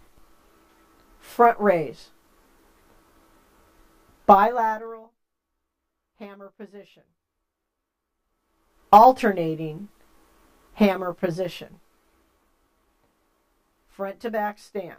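From 4.31 to 5.12 s there is zipper noise: the level falls by around 25 dB in 1 dB jumps, roughly twenty a second, with no smoothing between them. Each jump leaves a tiny click, so a ticking texture rides on the sound while it fades. On the waveform the envelope descends as a staircase, and the spectrogram shows faint, evenly spaced vertical broadband lines.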